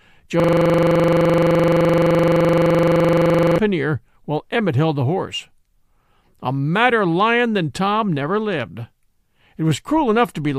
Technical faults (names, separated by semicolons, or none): system hang loop